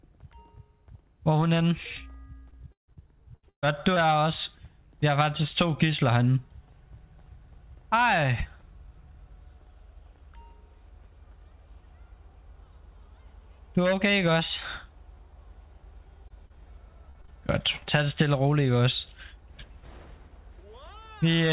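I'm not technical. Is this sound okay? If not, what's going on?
No. From 2.5 to 4.0 s and again from 16.3 to 17.3 s there is repeated packet loss, heard as a robotic sound. The audio keeps breaking up into choppy fragments as missing bits are papered over. Unlike a single dropout, these holes come one after another, and the first stretch is noticeably rougher. The call line also sounds muffled, like an ordinary phone call.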